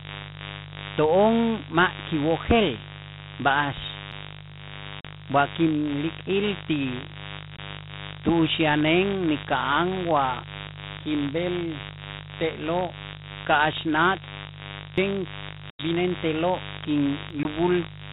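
A speech recording over a G.726 ADPCM telephone link carries a steady, raspy mains buzz from start to finish. It is based on 50 Hz, with harmonics stretching into the kilohertz range. The buzz sits only about 10 dB below the speech. Switching spikes from a dimmer, rectifier or poor shielding likely let it in. Sudden jumps forward in the speech occur at 4.12 s, 14.98 s and 17.30 s. These are likely dropped buffers (overruns). Each time the audio skips ahead with no gap. Roughly a few tens of milliseconds vanish at the first two, and less at the last. Hard-edged silent holes from packet loss on the ADPCM call fall at 5.01 to 5.05 s (40 ms), 7.57 to 7.59 s (20 ms), 15.70 to 15.83 s (90 ms) and 17.43 to 17.46 s (20 ms). The longest covers around ten packets. After each hole the decoder's predictor is out of step. The speech returns slightly distorted and briefly sounds rough before it settles.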